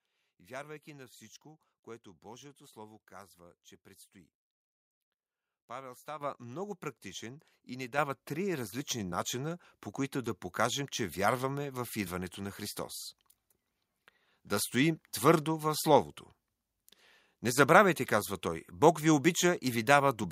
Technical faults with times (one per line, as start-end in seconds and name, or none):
6.21 microphone volume stepped up
7.98 microphone volume stepped up
9.00 microphone volume stepped up